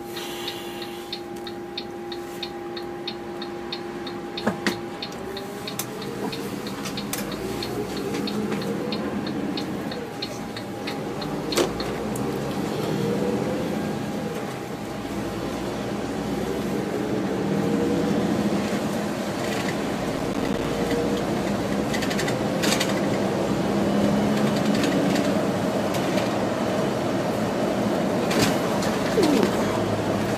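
From 20.14 to 20.65 s, a burst of gritty crackle tears through the sound for about half a second, then stops cleanly. This is processor overload crackle: the processor couldn't finish its small audio buffers in time, and deadlines slipped again and again over that stretch. Each missed buffer dropped out as a brief hard-edged silence. Dozens of these tiny gaps, each around 5 ms, which fits a short buffer setting, fuse into that rough tearing texture.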